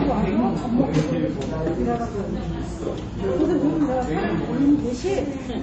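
From start to finish the treble stops dead at 8.3 kHz, and weak detail flickers in and out, giving a watery, swirling texture with smeared attacks. This is likely MP3 compression at a low bitrate, around 32 kbps, where the encoder drops high bands and zeroes quiet frequency lines.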